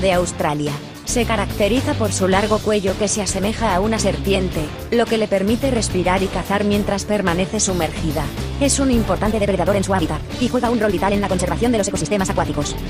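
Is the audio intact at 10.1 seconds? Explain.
No. From 9.10 s to 12.90 s there's a time-stretched section: the sound suddenly runs about 1.68 times faster while its pitch holds steady, so it comes across as rushed. This is likely software squeezing the audio to fit a shorter length by dropping short pieces. On a spectrogram, frequency bands stay at the same heights but events crowd closer together. The waveform shows denser envelopes with small jumps at the splices.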